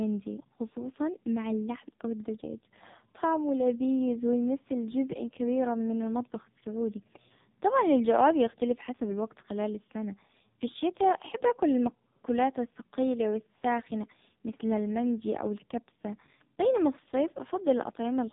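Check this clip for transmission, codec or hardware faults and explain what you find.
There's one fault, running the whole way through: AMR narrowband mobile codec. Nothing passes above 3.8 kHz, and the heavy buzzy, synthetic quality of the speech fits AMR-NB's low-bitrate mode, around 5 kbps.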